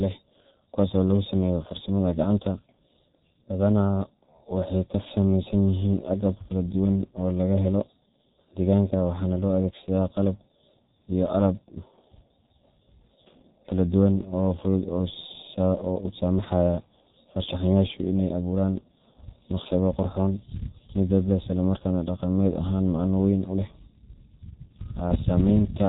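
G.723.1 codec damage runs throughout this speech clip: nothing survives above 3.8 kHz, so the sound is muffled, and the heavy coding at a rate consistent with about 6.3 kbit/s, with the codec's slowly updated 30 ms voice model, leaves it hoarse and smears consonants together.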